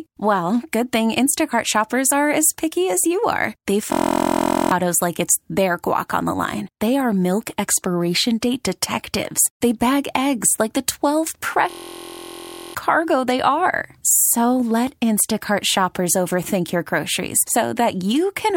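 System hang loop from 3.92 to 4.71 s, just before "like it's their guac", and again from 11.70 to 12.75 s, before "cargo they are". Both times the system stalled while the playback hardware kept replaying one 23.2 ms slice of its ring buffer, which fits a 1024-sample buffer. That slice repeats 34 and 45 times, giving a steady 43 Hz buzz in place of the speech. Roughly 0.7 s and about a second of speech are lost.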